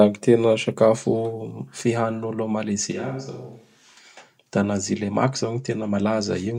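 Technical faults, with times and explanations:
2.92 to 3.97 s, switch to a distant microphone: just after "fihanin'olo a", the close microphone's signal likely drops out and a microphone further from the talker takes over for about a second. Because that capsule hears more of the room than the mouth, the speech turns suddenly hollow and reverberant, loses low-end body, falls roughly 10 dB in level and picks up faint room noise about 35 dB down. It snaps back just as abruptly at 3.97 s.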